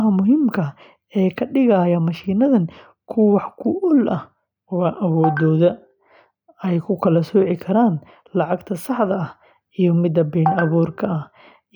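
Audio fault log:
No faults turn up anywhere in this speech recording. Nothing calls for a timed entry in the log.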